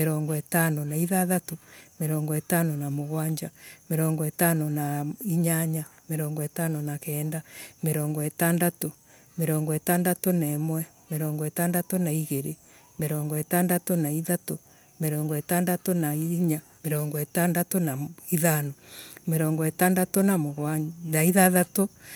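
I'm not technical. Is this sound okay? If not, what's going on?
Yes, nothing stood out as a problem when listening through this speech recording.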